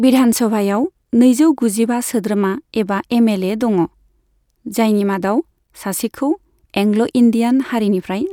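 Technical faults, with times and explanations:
No technical faults can be heard in this speech clip. Nothing in the audio calls for a time or an explanation.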